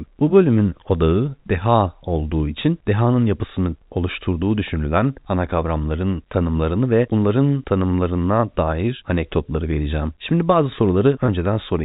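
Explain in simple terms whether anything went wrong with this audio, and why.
Packet loss with pitch repetition occurs at 11.26 to 11.28 s. A 20 ms gap, consistent with one lost packet, was filled by repeating the last pitch cycle, so it sounds like a brief buzzy hold.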